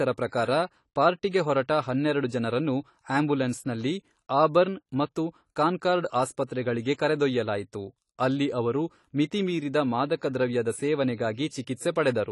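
AAC compression runs throughout the 12-second speech clip. Nothing reaches above 11.5 kHz, and the sound is dull and smeared with a warbling, fizzy edge on sibilants. The likely cause is AAC-LC coding starved of bits, which fits a bitrate around 32 kbps.

Pre-echo appears from 11.34 to 11.37 s. A sharp attack lands late in a transform block, so quantisation noise sized for the loud onset spreads back over the preceding 35 ms. This produces a short hiss just before the attack and leaves it sounding softened.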